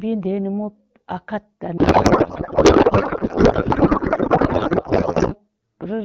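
From 1.77 s to 5.37 s, just after "nimop a kat a", the speech gives way to garbled noise and warble that barely tracks it. This is a codec payload misread: octet-aligned AMR frames are being unpacked as bandwidth-efficient, so every field lands in the wrong place.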